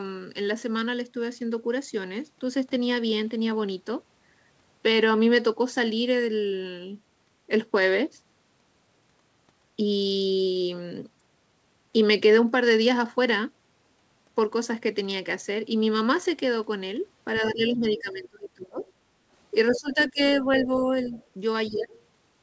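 From 17.41 to 18.85 s the talker's speech sinks by roughly 25 dB in places, the likely result of speech suppressed in double talk: both sides were talking, and the echo canceller ducked everything because it couldn't tell the near talker from the loudspeaker echo. Over the same stretch, 17.46 to 18.0 s, a faint second voice sits about 20 dB under the talker. That's likely the other side's voice leaking through, where the canceller didn't fully scrub the loudspeaker playback from the mic. A tiny scrap of it pops up again at 18.87 to 18.92 s, very low, around 35 dB down.

At 19.13 to 19.28 s the room tone dips by about 7 dB for a moment and then comes back. That's background gated by the echo canceller, which clamped the mic hard while the speaker was playing and let go about 150 ms later.

The busiest part runs from 19.72 to 21.15 s, where speech suppressed in double talk takes the talker down by around 15 dB. 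Meanwhile the leak gets much louder from 19.71 to 20.03 s, only about 10 dB under the talker, and then lingers faintly, about 25 dB down, from 20.6 to 21.99 s. One more brief duck, about 15 dB, lands at 21.69 to 21.94 s. All of this sits inside the G.722 call path's band, with nothing above 8 kHz.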